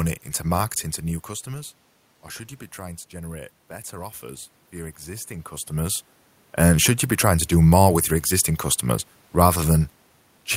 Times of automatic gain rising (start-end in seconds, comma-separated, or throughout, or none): 2.74-6.08